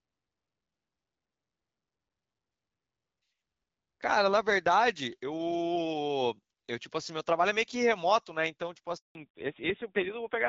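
Speech, carried over an AMR wideband (HD Voice) link whose light coding is audible as a slightly processed clarity up to about 7 kHz, consistent with the 12.65 kbit/s mode. At 8.97 s a handover gap opens: the sound fades within a few tens of milliseconds and stays fully silent for 180 ms, until 9.15 s. That clean, dead silence marks it as a network switch with no frames delivered. Ordinary packet loss would more often leave short concealment buzz or repeated fragments rather than a single clean hole. From 9.15 s to the end comes a fallback to narrowband. Nothing remains above 4 kHz, and the voice turns dull and rougher, which fits the low 5.9 kbit/s narrowband mode. The added raspiness is what separates this from a simple low-pass filter or EQ cut. A filter would remove the top end but leave the remaining band clean, whereas the codec change degrades the texture of what is left.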